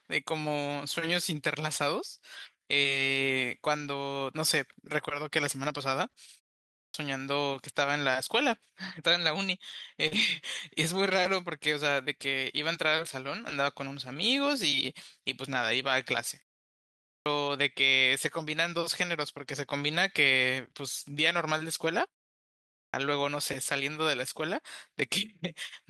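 Speech clip with packet-loss and output-device faults. At 3.77–3.91 s and 10.11–10.21 s, a lost packet rebuilt from error correction plays 80 ms and then 60 ms of rougher, noisier audio, decoded from low-bitrate redundant copies instead of the originals. At 10.07 s, short concealed packet loss fills about 40 ms of missing audio by extending the preceding sound, leaving a brief smear just before the second rebuilt section. A clipped start after a pause occurs at 6.62 s, 16.89 s and 22.60 s. After silences of 0.3 to 0.54 s, the output device is slow to wake and swallows the first 320–370 ms, so speech begins abruptly.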